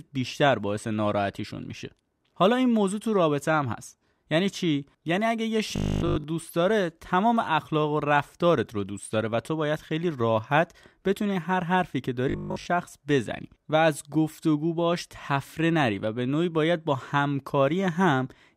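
Audio likely arrived too slowly for playback, so the software kept refilling the gap by looping a short stretch of the last buffer and skipping most of the real signal. That produces robotic sound from repeated short buffers at 5.76 to 6.24 s and again at 12.30 to 12.66 s. The repeats impose a fixed 50 Hz buzz, which fits a 20 ms loop, turning the speech into a stiff metallic drone that still roughly tracks its rhythm.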